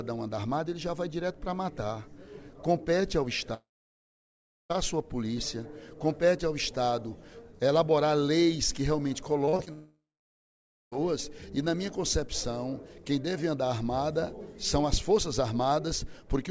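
At 3.54 s the sound breaks off for about 1.2 s, until 4.72 s. This is most likely a long network dropout: no packets reached the receiver, so it extended the last sound as a brief decaying buzz, and then roughly 1.05 s of near-silence followed. When audio resumes, the missing stretch is simply gone rather than delayed. Across the clip, the G.722 call path band-limits everything to 8 kHz.

From 9.46 to 9.69 s, repeated packet loss produces a choppy, robotic texture. Four short holes, the longest 37 ms, are each patched by extrapolating the preceding sound. Because the holes sit close together, the concealment covers about 40% of the span.

Almost immediately afterwards, at 9.73 s, a second likely long network dropout removes about 1.2 s, ending at 11.0 s. A short concealment tail gives way to about 0.9 s of silence before the audio returns.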